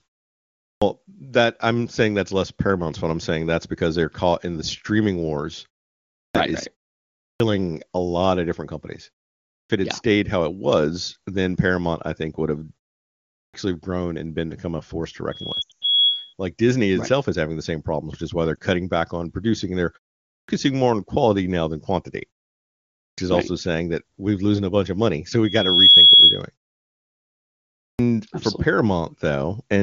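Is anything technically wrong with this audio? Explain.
Yes. Three kinds of fault are audible. The wideband codec itself sounds clean, consistent with a high AMR-WB rate, and the silent pauses are part of how the output behaves.

Clipped start after a pause at 0.66, 6.21, 7.25, 9.54, 13.39, 20.33, 23.04 and 27.86 s. After each silence the output device has gone idle and needs time to wake, so roughly 130 to 160 ms of onset is swallowed. At 9.54 s, following "lot of different companies", the phrase "it had yeah stayed" begins abruptly, missing its opening.

Loudspeaker feedback squeal from 15.31 to 16.34 s, right after "become a force to", and again from 25.44 to 26.43 s. The microphone re-captures its own loudspeaker, and at 3.3 kHz the loop gain exceeds one, so a single tone swells over roughly 0.4 seconds. It sits about 5 dB above the signal the first time and about 15 dB above the second.

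Lost AMR speech frames from 15.62 to 15.82 s, inside the first squeal, and at 18.56 s. Failed frames force the decoder to repeat its last good parameters at falling gain. The first burst drops 180 ms scattered over 200 ms, with a 100 ms run that drops to near silence. The second is a single 20 ms dip between "which is why they're" and "back on producing and".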